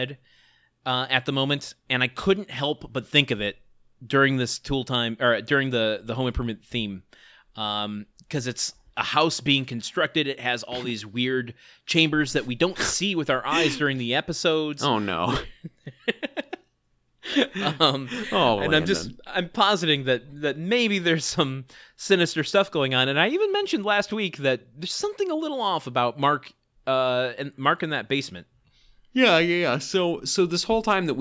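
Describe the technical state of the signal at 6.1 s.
At 6.1 s the audio is intact, with no fault audible at that moment.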